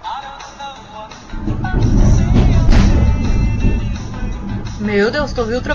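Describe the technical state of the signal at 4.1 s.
At 4.1 s the signal is intact, with no audible fault at that moment.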